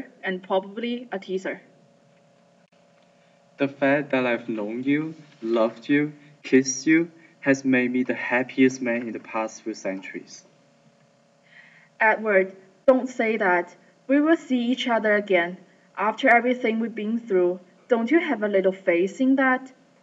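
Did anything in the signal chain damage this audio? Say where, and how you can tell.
No, no signal-chain damage heard.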